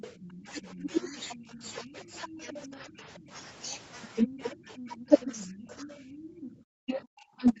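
Speech over a speakerphone-style call, and the echo canceller is struggling. There's other side's voice leaking through from 0.0 to 3.19 s and again from 4.27 to 7.07 s. A second voice sits behind the talker at roughly 15 dB down. That's most likely loudspeaker playback getting back into the mic because the canceller didn't fully subtract it. Overlapping that leak, you get speech suppressed in double talk. Between 0.36 and 3.3 s the talker's level keeps ducking, as deep as around 25 dB, for something like a second and a half in total. From 4.25 to 5.91 s it happens again, around 20 dB deep and roughly a second's worth. From 6.8 s to the end at 7.6 s it's the worst, dropping around 40 dB, so the talker nearly vanishes. The canceller likely couldn't tell its own talker from the echo while both sides spoke, so it pulled everything down. Then at 6.19 to 6.42 s there's background gated by the echo canceller. 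The room tone falls away by about 19 dB for a fifth of a second or so and comes back, because the mic was clamped hard while the far end was playing. Across the whole clip the band tops out at 8 kHz, which fits an Opus call path running around 40 kbps.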